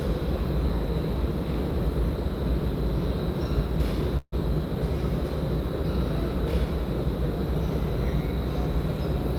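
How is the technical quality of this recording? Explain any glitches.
One glitch is audible. At 4.17–4.34 s there is a call audio freeze, likely from delayed packets draining the jitter buffer. The last sound stretches into a fading buzz, then goes silent for about 40 ms before resuming where it stopped, with nothing missing and everything after shifted about 0.15 s later.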